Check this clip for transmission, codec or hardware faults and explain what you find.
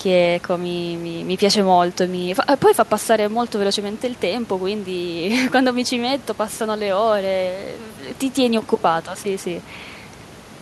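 No faults detected; nothing to report.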